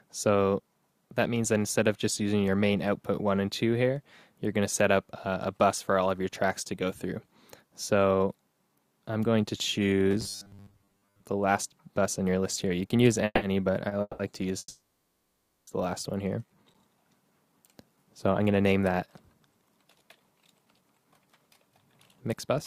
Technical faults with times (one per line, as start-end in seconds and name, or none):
10.11-11.22 robotic sound from repeated short buffers
13.25-13.43 call audio freeze
13.88-13.93 short stall from a late packet
14.01-14.33 call audio freeze
14.58-15.69 call audio freeze
16.28-16.73 jitter buffer slow-down
17.31-22.56 jitter buffer speed-up